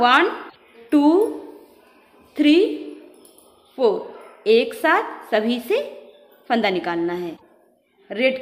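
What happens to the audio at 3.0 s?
Nothing goes wrong at 3.0 s; the audio runs through that moment intact, with no dropout, click or other disturbance.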